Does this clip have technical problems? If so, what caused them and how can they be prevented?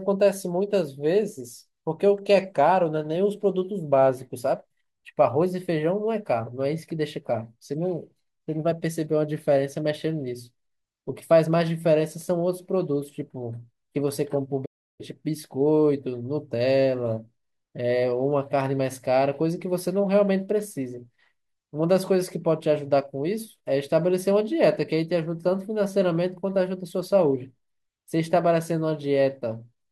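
Yes. A playback stall occurs from 14.65 to 15.01 s. The player likely ran short of buffered data, or its audio thread was held up, so output halted for about 336 ms. The speech cuts off mid-flow, a third of a second of silence follows, and then the sound resumes. To prevent it, give the player a larger buffer and keep its audio thread free of blocking work.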